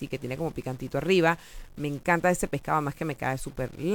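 Speech with a stuck bit throughout: the audio has a harsh, buzzy grit, and pauses fill with a steady noise floor around -50 dBFS, likely from one data bit held fixed. Unlike clipping, the distortion persists at quiet levels instead of only on peaks.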